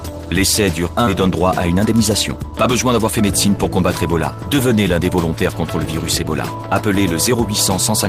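At 1.07 s the sound jumps abruptly forward with no gap, skipping ahead. About 0.4 s of audio was dropped while later audio waited, and the two sides were spliced directly together. From 1.70 to 3.46 s the sound runs hurried at unchanged pitch in a jitter buffer speed-up. Short pitch-period slices, roughly 150 ms in total, were trimmed to shrink a backlog, making playback about 7% fast.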